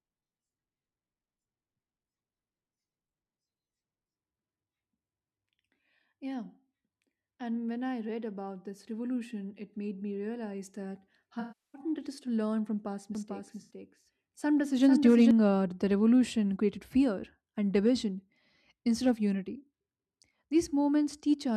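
Speech with AAC frame loss with concealment at 11.40–11.81 s, between "me realize that how" and "it is to learn", and briefly at 13.61–13.73 s: the decoder smears the last spectrum into a noisy, phasey patch, seen as blurred, featureless spectrogram bands. From 13.15 to 15.31 s, after "to learn from past" and ending before "uh the revolution created", a doubled audio track, likely a second capture path, repeats everything around 0.4 s late and about 5 dB quieter, showing as a shifted, repeated waveform pattern with abrupt edges.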